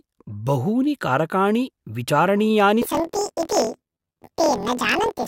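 From 2.82 s, right after "बहूनि कारकाणि विचारणीयानि", the speech turns into a robotic buzz near 41.7 Hz and is shifted up an octave until the end. This is planar audio read as interleaved: each 24 ms block of left-then-right samples plays twice at double speed.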